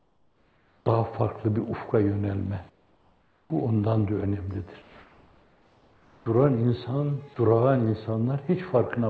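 From 0.00 to 0.86 s the background is replaced by comfort noise. The real ambience gives way to a steady, featureless hiss, about 5 dB quieter. The likely cause is discontinuous transmission. The sender stopped sending during the pause, and the receiver filled it with synthetic noise. That noise is shaped only roughly like the true background, which here sits about 40 dB below the loudest sound.

The same comfort noise in place of the background returns from 2.70 to 3.50 s, about 8 dB quieter. It comes again from 4.82 to 6.26 s, about 3 dB quieter, over a background about 34 dB down. Each stretch sounds flat and lifeless.

Both later gaps end with an onset clipped by the voice detector. At 3.46 to 3.50 s, 40 ms of the returning sound is missing. At 6.24 to 6.26 s, 20 ms is missing. The detector likely reacted late, so those first moments were never sent. Synthetic noise stands in for them. 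The sound jumps in abruptly, without its soft start.

From 7.34 to 7.36 s, 20 ms of sound is dropped by the voice detector. It likely mistook a quiet passage for background. For that instant the sound gives way to steady noise or near silence, then comes straight back. The call path caps everything at 8 kHz, which fits a 64 kbps G.722 stream.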